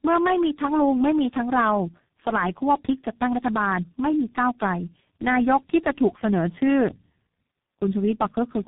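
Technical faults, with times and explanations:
Throughout: tandem speech coding. The speech passes through four speech coders in turn, each re-encoding the previous one's degraded output, so it sounds rough, muffled and warbly. A spectrogram shows nothing above 3.8 kHz and smeared, unsteady formant bands, which fits a chain ending in a low-rate coder.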